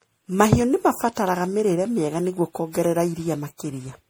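Throughout the speech there is generation loss: the sound is swirly, smeared and hollow, with blurred consonant attacks and content reaching about 20.3 kHz. This likely comes from repeated MP3 re-encoding, around seven passes, fitting a 64 kbit/s chain, each pass quantising on a shifted frame grid.

At 1.27 s an electrical switching spike appears as a sharp snap laid over the speech, lasting about a millisecond. The likely cause is a nearby switch or static discharge arcing briefly and being picked up by the audio line.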